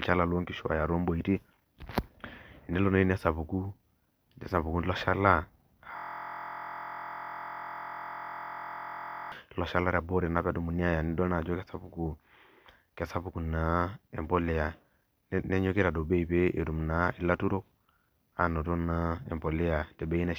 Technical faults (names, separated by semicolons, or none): system hang loop